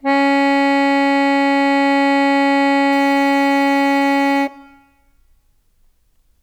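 From 2.93 s to the end, the music gains a gritty, inharmonic fizz. This is crude rate conversion. Samples were dropped or repeated without filtering, which fits a 48 kHz to 44.1 kHz change. The error sits about 30 dB below the music.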